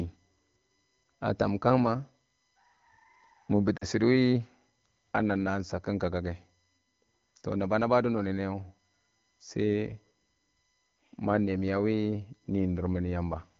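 A thin, steady whine sits under this speech recording from start to finish, pitched at 1 kHz and loudest in its harmonic at 8 kHz, roughly 45 dB below the voice. That fixed-pitch tone is USB whine: the bus pulls current in 1 ms frames and 125 microsecond microframes, and the ripple leaks into the audio through shared power or ground. From 3.78 to 3.85 s the voice briefly smears and dips for about 40 ms, which fits two lost AMR speech frames. Radio errors corrupted them, and the wideband decoder filled the gap by repeating the last good pitch and vocal tract settings at falling gain.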